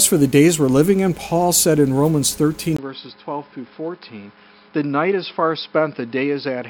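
At 2.77 s the input likely switched to a poorer device. After a 20 ms gap, the sound is about 10 dB quieter, dull above 5.3 kHz, and faintly noisier.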